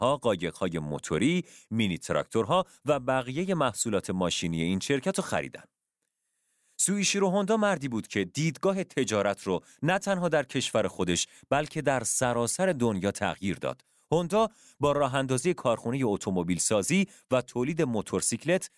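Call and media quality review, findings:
No faults found in playback.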